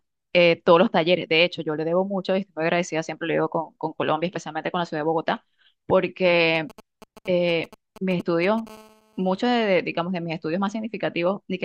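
A 2G mobile phone near the recording chain begins exchanging signalling with its network at 6.55 s. The audio circuitry rectifies these short clusters of radio bursts, producing GSM signalling bursts until 8.69 s: a galloping dit-dit-dit of brief buzzes pulsing at 217 Hz. They sit roughly 20 dB below the speech, a rhythmic interference pattern unrelated to anything being said.

At 8.70 s the same phone moves into an active call and transmits continuously at 217 bursts per second. Rectification of that steady pulse train gives a GSM phone buzz, which runs until 9.69 s. It is a hard, raspy 217 Hz tone with many harmonics, at about 29 dB below the speech. It is nearly steady rather than gated, so it becomes a sustained harsh drone underneath the speech instead of the earlier stuttering clusters.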